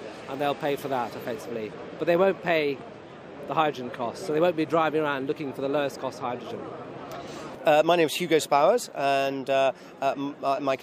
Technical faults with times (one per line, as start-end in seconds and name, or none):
1.41-7.27 de-emphasis applied wrongly